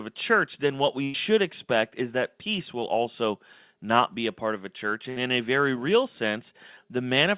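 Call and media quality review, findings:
Burst of packet loss, 1.04–1.16 s and 5.10–5.18 s: jitter-buffer concealment repeats the last frame, fading over about 100 ms and 60 ms, then skips ahead past the missing audio. Spectrogram: smeared, repeated bands decaying, then an abrupt restart. Waveform: decaying envelope.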